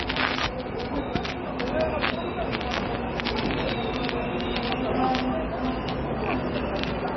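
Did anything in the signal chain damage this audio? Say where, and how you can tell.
Yes, at the codec stage: the whole clip sounds like heavy MP3 compression, likely at a very low bitrate, around 24 kbps. Nothing comes through above 5.9 kHz, and there's a watery swirl as weak frequency bands flicker on and off between frames because the encoder ran short of bits.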